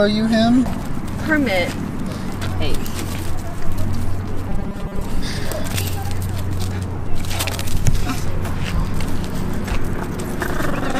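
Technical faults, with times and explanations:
4.49 to 5.04 s, robotic sound from repeated short buffers: for just over half a second the sound turns into a rigid, metallic buzz at a fixed 200 Hz that still loosely traces the original contour. The likely cause is audio arriving too seldom, so playback fills the gaps by looping the last fragment, about 5 ms long, while roughly half of the real material is skipped. Each repeat restarts on that period, imposing the steady 200 Hz pitch.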